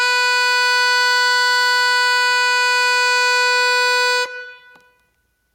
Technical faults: gain pumping

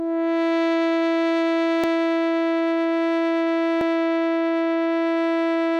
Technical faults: audio missing between chunks

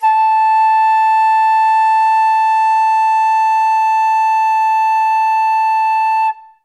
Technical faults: none

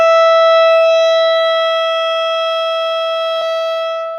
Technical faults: stream segment skipped

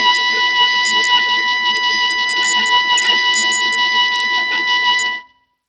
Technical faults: Bluetooth SBC compression

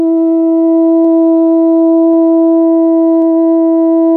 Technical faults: dropped buffer (overrun)

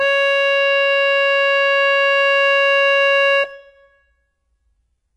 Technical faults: HE-AAC compression

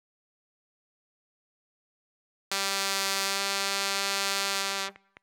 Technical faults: audio dropout to silence; train of clicks

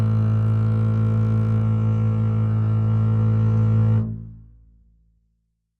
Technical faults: adaptive stream at a lower bitrate

